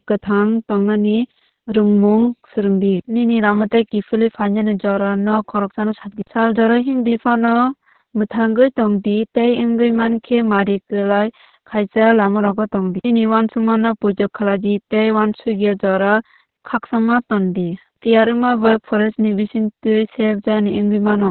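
From start to finish the speech carries heavy Opus voice compression. There's nothing above about 4.3 kHz, so it sits in narrowband and sounds muffled, like an old phone line. The coarse excitation coding adds hoarseness and a faintly robotic buzz, which points to the SILK coder squeezed down to around 6 kbps, probably working in long 60 ms frames. That rate forces the encoder to throw away both bandwidth and fine detail.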